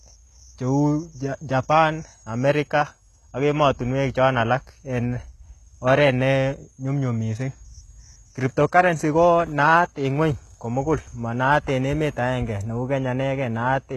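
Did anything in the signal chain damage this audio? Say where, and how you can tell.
Yes, at the codec stage, likely HE-AAC compression at a very low bitrate, around 16 kbps. Throughout this speech, the treble is resynthesised from copied lower bands rather than coded, so s sounds turn gritty and lispy with plainly audible damage.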